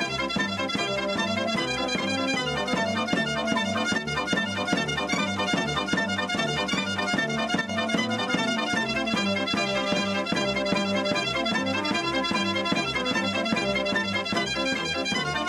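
At 3.98 to 4.07 s and again at 7.61 to 7.69 s, the level drops abruptly by about 6 dB and then snaps back, with the tone unchanged. This is likely one channel drops out. Unlike a fade or gain ride, each step is instant and flat-bottomed.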